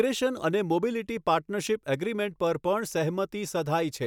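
No technical faults can be heard anywhere in the recording, which carries its speech without any audible disruption to the signal.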